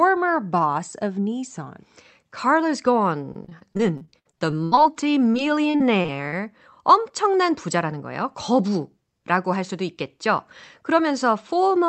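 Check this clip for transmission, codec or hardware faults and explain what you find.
Two stretches of repeated packet loss (robotic sound) are present. The call path, which sounds like Opus limited to about 8 kHz, is heard as that band limit and its usual coding noise.

From 3.33 to 4.87 s, and again from 5.32 to 6.34 s, just before "엄청난 부자라는 거예요 거부", packets keep going missing. Each hole is bridged by stretching the last sound, up to 75 ms and 42 ms. About a quarter, then a fifth, is patched. The speech turns choppy, with pieces missing.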